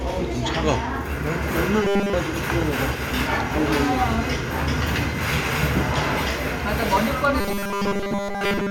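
Robotic sound from repeated short buffers affects this recording of everyday sounds from 1.83 to 2.13 s and again from 7.41 s to the end. Both stretches carry a rigid metallic buzz at 200 Hz, and almost nothing new comes through. The likely cause is audio arriving too seldom, so a block about 5 ms long is replayed over and over while the real signal is skipped, and that repetition rate sets the fixed pitch.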